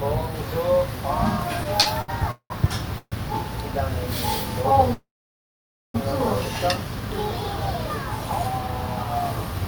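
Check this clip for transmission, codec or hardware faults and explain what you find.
Three transmission faults affect the clip: a burst of repeated stalls and two call audio freezes, with nothing lost in any of them.

From 1.63 to 2.52 s there are repeated stalls (stutter). Packets kept arriving late, draining the jitter buffer five times. The receiver stretched the last sound across each gap, 328 ms in total and up to 191 ms at once, so roughly a third of that stretch drags and stutters.

The two call audio freezes were likely caused by packets held up in transit, emptying the buffer. At 2.98 to 3.14 s the sound is continued for 136 ms, ending in about 30 ms of silence. At 4.93 to 5.96 s a fill lasting about a second fades to 890 ms of silence before the audio resumes where it stopped.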